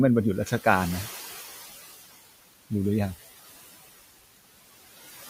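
Noise suppressor artifacts run through the whole speech clip. The suppressor pulls the bands it judges to be steady noise down by about 14 dB frame by frame, so the room noise, sitting about 19 dB below the voice, drops away in pauses and returns under speech. On a spectrogram the noise floor shows as patchy, flickering blocks that vanish between phrases.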